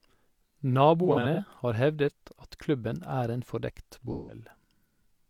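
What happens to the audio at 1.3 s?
AAC frame loss with concealment, 1.03–1.40 s: brief dropouts (runs of roughly 40 ms) are rebuilt from the last good spectrum, causing smeared, phasey patches that appear as blurred, flattened spectrogram columns.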